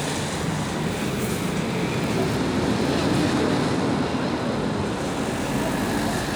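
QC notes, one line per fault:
throughout, periodic clock jitter: a rough, metallic edge clings to everything in the sound, harshest on the brightest material and gone whenever the audio drops to silence. The converter's sampling clock is being wobbled at a steady rate of around 1 kHz, so each component of the sound picks up sideband copies about 1 kHz above and below it. Higher frequencies are smeared more by the same timing error, so their sidebands come through strongest.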